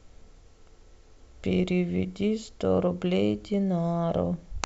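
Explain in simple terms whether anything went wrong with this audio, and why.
Nothing went wrong here.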